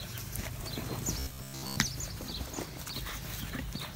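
Between 1.19 and 1.78 s, new audio likely arrives too seldom, so playback keeps looping the last short chunk of about 15 ms while roughly two thirds or more of the real signal in that stretch is skipped. This is robotic sound from repeated short buffers. Each chunk repeats at a fixed rate, so the sound turns into a rigid, metallic buzz near 66.8 Hz that only loosely follows the underlying audio.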